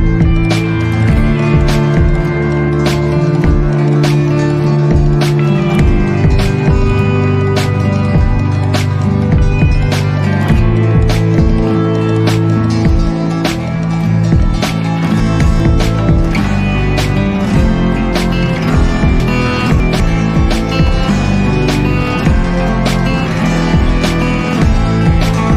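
At 15.2 to 15.6 s and again at 19.2 to 20.0 s, the audio has chunks out of order. Two 200 ms blocks swap places in the first, and in the second a block arrives three blocks late. Nothing is missing, but each jumble carries three hard joins. On a waveform, the envelope jumps at 200 ms boundaries. A spectrogram shows vertical seams where harmonic tracks break and resume out of sequence.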